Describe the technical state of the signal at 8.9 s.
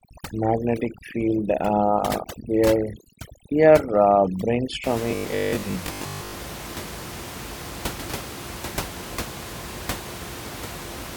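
At 8.9 s the signal is intact, with only the room's own background noise sitting about 12 dB below the speech.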